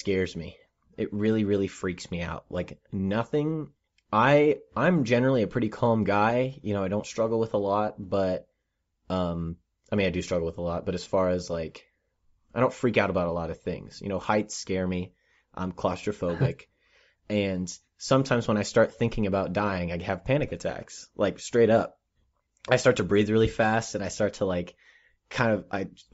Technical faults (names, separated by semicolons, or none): Bluetooth LC3 compression; lost LE Audio frames